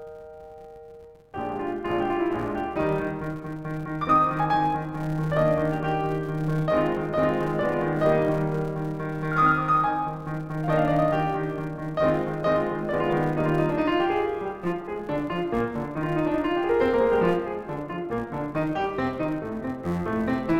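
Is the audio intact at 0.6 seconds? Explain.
No. At 0.6 seconds, as throughout the whole music clip, a steady 172 Hz buzz of tiny ticks rides under the sound, rising and falling with the music's level. This is a filter restarted on every block: the filter discards its memory at each block boundary and starts again from silence, so every block opens with a small transient. The tick rate fits a 256-sample block.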